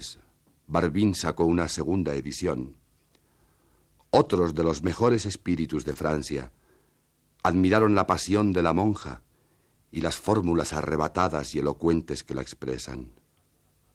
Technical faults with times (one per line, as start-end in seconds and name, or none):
1.19-1.21 lost packet rebuilt from error correction
2.59-2.65 lost packet rebuilt from error correction
4.23-4.49 lost packet rebuilt from error correction
5.11-5.17 lost packet rebuilt from error correction
5.93-5.97 short concealed packet loss
5.95-5.97 lost packet rebuilt from error correction
7.79 lost packet rebuilt from error correction
8.93-9.07 lost packet rebuilt from error correction